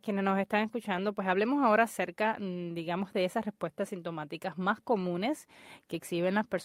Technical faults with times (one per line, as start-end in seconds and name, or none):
none